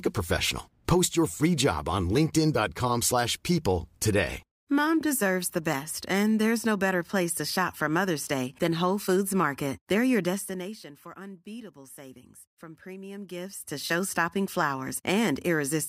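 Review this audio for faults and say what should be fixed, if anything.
Nothing stood out on listening to this speech, so there is nothing to fix.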